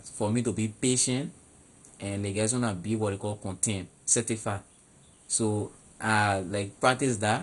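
Throughout, the speech sounds dull, nothing above 11.2 kHz, with heavy gurgling, flickering grain, likely MP2 compression at a rate fitting 56 kbps, unlike a clean low-pass filter.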